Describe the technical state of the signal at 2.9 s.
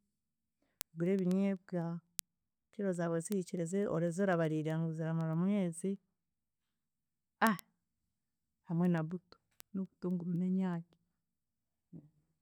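At 2.9 s the speech carries word clock ticks, part of a run of short, sharp ticks from 0.18 s to 12.37 s, recurring roughly every 0.15 s. The receiving device is running on its own clock rather than locking to the incoming digital link, so each time the two clocks slip past each other a few samples are misread and one sample is dropped or repeated. The spacing points to a clock mismatch of roughly 150 ppm. Unlike random digital clicks or dropouts, these ticks arrive at a steady, metronomic rate even as their strength varies.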